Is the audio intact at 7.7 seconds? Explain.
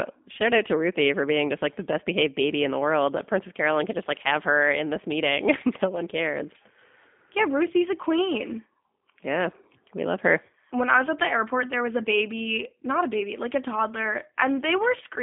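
No. At 7.7 seconds, as throughout, the speech sounds slightly rough and synthetic, with nothing above 3.6 kHz and a thin 200 Hz to 3.5 kHz telephone band. This is G.729 codec damage: speech is rebuilt from a vocal tract filter, pitch prediction and sparse pulses, consistent with 8 kbit/s.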